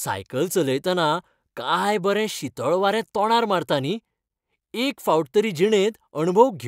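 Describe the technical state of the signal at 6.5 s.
At 6.5 s the speech signal is intact, with no technical fault present at that moment.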